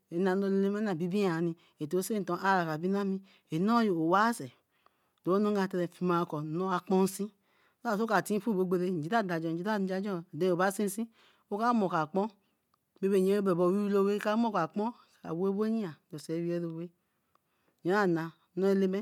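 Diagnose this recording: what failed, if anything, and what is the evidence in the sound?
Nothing failed in this recording, and the sound gives no evidence of any fault at any stage.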